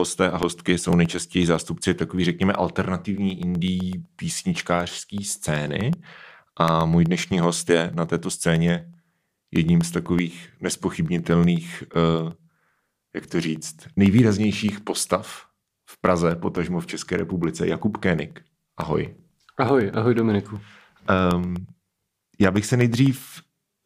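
Speech marred by periodic USB or driver dropouts from 0.05 to 23.69 s. Every 0.125 s, roughly half a millisecond of audio is replaced by silence, producing about eight ticks per second. Their strict regularity, and their absence during pauses, separates them from random clicks.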